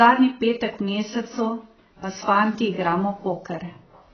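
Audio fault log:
Throughout: AAC compression. Nothing reaches above 6.5 kHz, so the speech sounds dull and smeared, with a warbly, fizzy edge on sibilants. That's likely heavy AAC-LC coding, consistent with a very low bitrate around 12 kbps, where the encoder cuts the top band and leaves spectral holes.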